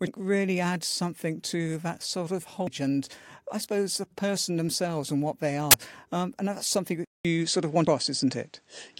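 Damaged data in the compressed stream causes brief glitches at 0.07, 2.67 and 7.87 s and a longer disruption from 5.37 to 5.74 s, as the decoder loses frame sync. At 7.05 s, after a 200 ms silence, the audio turns dull, with nothing above 9 kHz, a level shift of about 5 dB and new noise about 45 dB down. This is likely an input switched to a poorer device.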